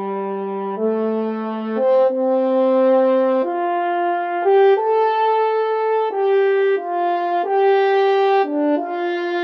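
Nothing technical stands out here; the audio runs along without any fault worth pointing to.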